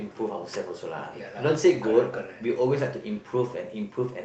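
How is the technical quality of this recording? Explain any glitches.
Two brief rough patches, both a lost packet rebuilt from error correction, at 0.53 to 0.55 s and again at 1.53 to 1.55 s. Each time one 20 ms packet went missing, and the decoder filled it from the low-bitrate copy carried in the next packet, so there's no dropout. Those two slices just sound a bit coarser and noisier. The call codec itself sounds like Opus, with the audio topping out around 8 kHz.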